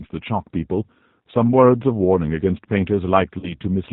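From the start, the speech carries G.729 codec damage, plainly audible. The codec rebuilds each 10 ms frame from a vocal tract filter, a pitch predictor and a few pulses, at 8 kbit/s. Nothing above 4 kHz survives. The voice sounds rough and slightly synthetic.

At 3.39 s, VoIP packet loss concealed by the speech codec begins. About 40 ms of audio went missing, which fits two 20 ms packets. The decoder filled the gap by repeating its last pitch and filter at falling gain. This gives a brief fading smear. Because each frame builds on the one before, the sound stays weak or distorted until about 3.54 s.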